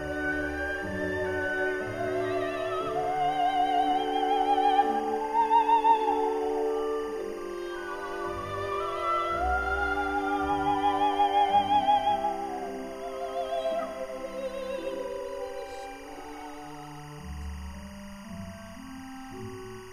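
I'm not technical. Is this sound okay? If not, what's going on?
No. A faint chirping warble runs behind the sound for the whole clip, from start to finish. This is timecode bleed. Timecode is a signal used to keep recording equipment in sync. It comes from a nearby track or cable and leaks into this one. Here it flips between two high pitches, roughly 1 and 2 kHz. It repeats 24 times a second, which gives the steady chattering texture. It sits quietly, well below the main sound.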